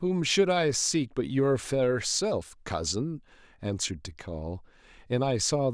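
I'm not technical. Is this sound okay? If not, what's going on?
Yes, nothing stood out as wrong when listening to this recording.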